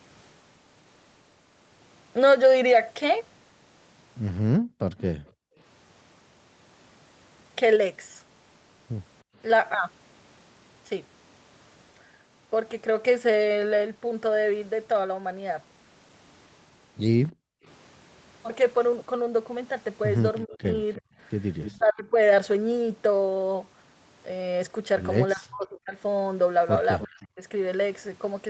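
Between 4.58 and 5.58 s the room tone beneath the speech drops away, about 37 dB at its deepest, for roughly half a second in total before it comes back. This is background gated by the echo canceller: while the far side's sound played through the loudspeaker, the canceller clamped the microphone down hard. The same brief hole returns at 9.23 to 9.36 s, about 37 dB deep and lasting a fraction of a second, and at 17.32 to 17.65 s, about 40 dB deep.

Overlapping the first dip, from 4.98 to 5.6 s, a faint delayed copy of the talking trails behind it, lagging by 306 ms and sitting well below the main level, about 25 dB down. It is likely an echo leak, where the loudspeaker side's canceller let part of its own playback through to the microphone and sent it back.

From 20.45 to 22.15 s the talker's level sinks in pieces, up to about 25 dB, for well over half a second in total, as if being pushed under. 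Speech suppressed in double talk is the likely cause: with both sides speaking at once, the canceller could not tell the talker from the loudspeaker echo and turned everything down. A louder echo leak pokes through inside this stretch at 21.63 to 21.78 s, again 306 ms late and only about 15 dB below the speech.

The same pattern recurs from 25.33 to 27.41 s, with the talker cut back by up to about 30 dB for around a second in total, and a short echo scrap at 26.99 to 27.07 s, 306 ms behind and about 15 dB down. The unchanging 306 ms delay across all three echo scraps points to a single return path.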